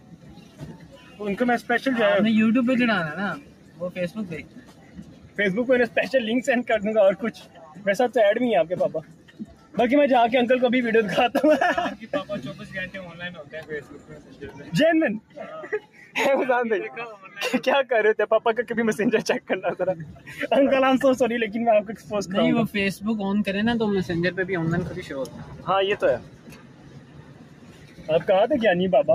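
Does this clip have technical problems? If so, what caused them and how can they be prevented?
Yes. A noise suppressor applied to music or sounds stays active throughout. It was designed for speech, so it treats steady tones and fading tails as noise. Level swings by around 10 dB, and the sound pumps and thins. Switching suppression off for non-speech material prevents this.

Sound cut by the noise suppressor occurs at 0.00–1.21 s, 3.37–5.38 s, 7.32–9.77 s, 12.01–17.37 s, 19.41–20.32 s, 21.91–22.11 s and 24.99–28.08 s. Held and decaying sound sinks by about 9 to 11 dB, while attacks get through. Bypassing the suppressor, or using a music mode, prevents it.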